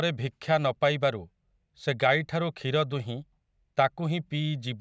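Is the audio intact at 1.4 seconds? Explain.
Yes, the audio is intact at 1.4 seconds, with no fault heard at that moment.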